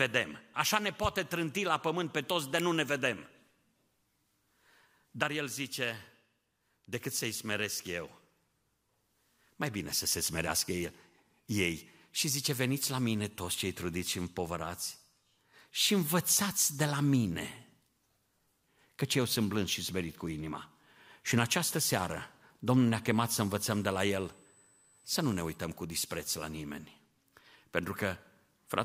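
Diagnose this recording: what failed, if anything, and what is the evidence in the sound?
USB whine, coming in on the analogue side through power or ground: a steady 8 kHz tone sits roughly 35 dB under the speech from 23.07 to 25.57 s, ending just before "cu dispreț la nimeni". That pitch matches the bus's 125 microsecond microframe current draw leaking into the audio path.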